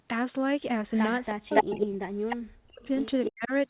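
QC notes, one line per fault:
0.88–1.0 s, 1.22–1.32 s, 1.54–1.86 s, 2.3–2.36 s, 2.83–3.05 s, 3.23–3.3 s: echo leak. Delayed scraps of the voice trail the talker, faint at times but about 5 dB louder than the speech near 1.54–1.86 s. The likely cause is an echo canceller passing loudspeaker pickup back, at about 321 ms and then 283 ms delay.
1.32–2.89 s and 3.27–3.52 s: speech suppressed in double talk. The voice dips and breaks up in pieces, falling by as much as about 40 dB while the echo overlaps it. This is likely the canceller, unable to separate talker from echo, turning both down.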